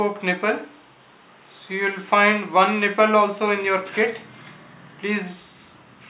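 No technical faults are audible.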